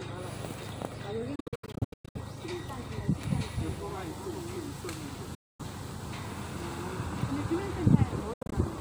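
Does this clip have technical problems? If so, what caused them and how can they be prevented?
Yes. There are three Bluetooth dropouts. From 1.35 to 2.19 s the sound keeps cutting out in short holes, about 0.55 s gone in total, the longest about 0.11 s. At 5.35 to 5.64 s it disappears for about 0.24 s, and from 8.33 to 8.54 s more brief gaps add up to about 0.14 s. Playback resumes as if it never paused, which most likely means packets reached the headphones too late and got dropped. To prevent it, keep the headphones close to the source, clear of obstructions and 2.4 GHz interference, or record over a wired connection.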